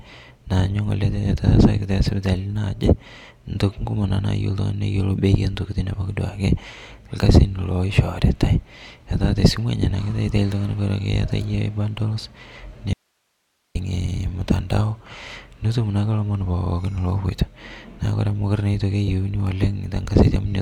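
At 12.93 s the speech cuts out abruptly and stays gone until 13.75 s, a dropout to a faint residue lasting about 0.82 s. Only hiss remains, roughly 50 dB down. Likely cause: the signal feed broke while the downstream path stayed live.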